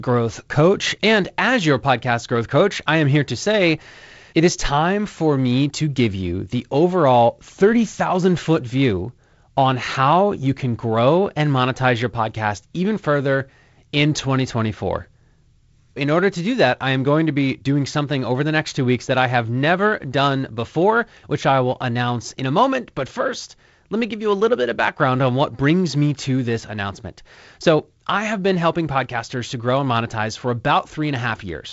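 Speech, with no technical fault to report. It comes through G.722 wideband telephone coding, with the content ending around 7.7 kHz and a faint coding hiss and slightly grainy lower band, which fits the codec running at 48 kbit/s.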